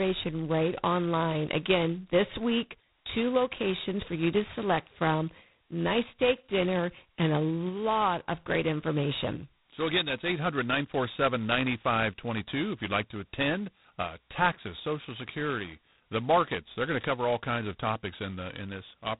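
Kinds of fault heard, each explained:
G.726 ADPCM: The speech is coded as tiny differences from a running prediction, and here the coarseness points to the 16 kbit/s mode, just two bits a sample. That leaves a heavy, rasping hiss that swells and shrinks with the speech level, and nothing above about 3.9 kHz survives. A plain narrowband filter would dull the sound without the grit, and mu-law quantisation would add a finer, steadier hiss than this harsh, level-tracking rasp.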